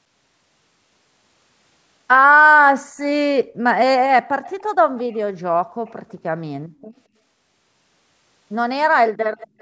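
At 2.89 s the room sound dips sharply for about 50 ms, then comes back by 2.94 s. This is background gated by the echo canceller. While the far end's audio played out of the loudspeaker, the canceller pulled the microphone down hard, by about 25 dB at the deepest point. The background briefly vanishes and snaps back once the canceller releases.

An echo leak follows, heard at 4.44–4.63 s, 4.97–5.17 s, 5.86–5.93 s, 6.09–6.13 s and 9.38–9.61 s. Each time, a faint copy of the speech trails the original by 221 ms. It sits well below the speech, roughly 25 to 35 dB down, faintest around 5.9 and 6.1 s. The likely cause is an echo canceller on a loudspeaker side failing to remove all of the sound its microphone picked up, so scraps were sent back.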